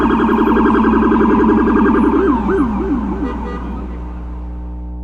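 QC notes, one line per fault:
Throughout: mains hum, a steady low 60 Hz drone with some low harmonics above it, sitting only about 10 dB below the sound itself, so it is clearly audible. A ground loop or nearby transformer has coupled the power line into the signal path.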